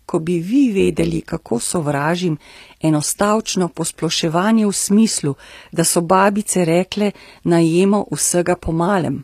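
A speech clip with plainly audible codec damage throughout. The treble is bright but synthetic: sibilants sound gritty and metallic, and harmonics fail to line up in the upper band. This is likely HE-AAC compression, with the treble rebuilt by spectral band replication, which fits a low bitrate around 24 kbps. From 0.8 to 1.77 s, just after "ko bi vi", overlap-add ripple makes the level pulse by about 11 dB at a rate of around 100 Hz. The result is a metallic buzz with extra tones around each note, caused by frames being recombined with an overlap that does not sum to constant gain.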